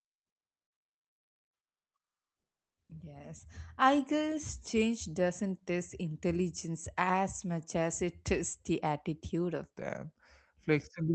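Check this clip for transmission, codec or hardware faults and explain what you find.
Two faults stand out, one at each end of the clip, heard through the band-limited sound of a call codec that tops out around 8 kHz.

From the start to about 2.89 s there's comfort noise in place of the background. The real room sound gives way to a flat, featureless hiss about 10 dB quieter. That's likely discontinuous transmission: the sender stopped sending during silence, and the receiver filled the gap with synthetic noise.

From 9.73 s, right after "tests the attitude of", to the end there's a section at the wrong speed. It plays at 0.84 times normal speed, so everything drags and drops about three semitones. This likely comes from playback against a mismatched clock, which shifts tempo and pitch together.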